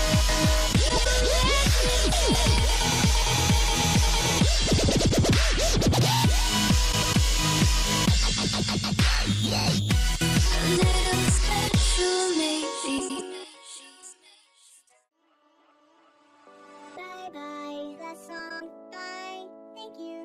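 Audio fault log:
0.89–1.06 s, 4.88–5.11 s, 6.92–7.15 s, 12.98–13.20 s and 18.39–18.62 s, frames out of order: each is a brief garbled flutter where two neighbouring blocks, 78.4 ms at the first and 104.5 ms at the rest, play swapped, with no time lost.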